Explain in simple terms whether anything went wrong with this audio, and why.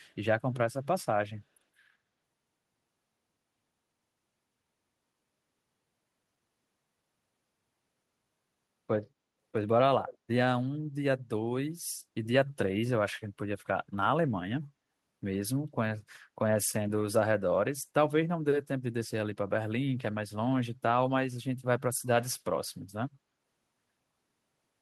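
From 10.06 to 10.18 s, a faint, delayed copy of the speech trails the original by about 0.16 s. This is echo leak, likely from a loudspeaker on the other end whose echo canceller let some of its own microphone pickup slip back.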